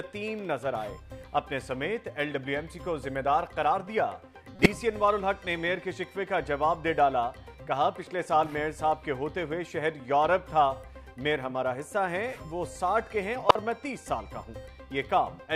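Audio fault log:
4.56–4.66 s and 13.49–13.56 s, corrupt frame decoded: two short, loud glitches, roughly 100 ms and 60 ms long, peaking around -5 dBFS. Each fits a few damaged compressed frames that the decoder played anyway instead of concealing them. Flipped bits produced wrong gains or misread codes, so energy landed at the wrong frequencies and the glitches last only as long as the damaged frames.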